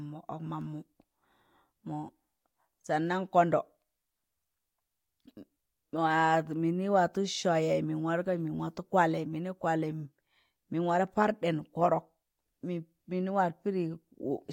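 No technical faults can be heard anywhere in the speech.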